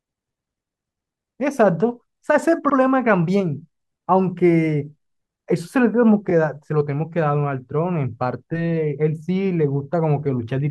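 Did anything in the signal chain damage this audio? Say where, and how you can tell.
Yes. Repeated frames in the codec or storage stage cause a stutter at 2.69–2.75 s, where a 64 ms block plays twice, and at 6.29–6.31 s, where a 21.3 ms block repeats. Each repeat lengthens the audio.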